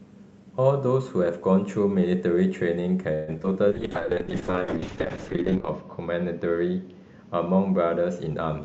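A speech clip carried over a WebRTC call path, with Opus coding. Between 3.13 and 3.57 s there is repeated packet loss, and it sounds robotic. Four separate holes open in quick succession. The longest lasts about 143 ms. Each hole is bridged by stretching the last bit of sound forward, so roughly 40 percent of that stretch is patched rather than real. Small pieces still drop out. The result is choppy. From 3.70 s to the end comes a call bitrate drop. The encoder falls from 64 kbps to about 6 kbps and sits at its lowest for nearly 2 s. At that rate the coding turns coarse and the top end is cut back below the call's usual 8 kHz limit. The sound goes rough, watery and muffled.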